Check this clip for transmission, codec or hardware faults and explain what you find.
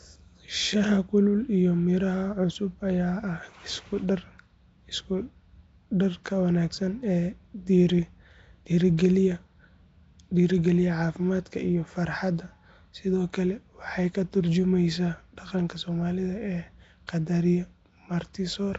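One codec fault runs through the whole clip. Throughout, the speech carries a rough, hissy halo and a smeared, underwater quality, with nothing above 7.8 kHz. This is likely Nellymoser compression: Nellymoser Asao spends a fixed, small bit budget per block, fitting a 32 kbps stream, so weak bands get no bits and are filled with noise.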